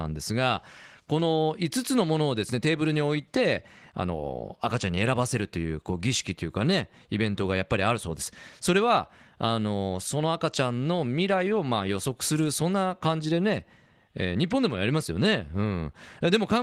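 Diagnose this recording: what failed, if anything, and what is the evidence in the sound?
Nothing failed in this recording.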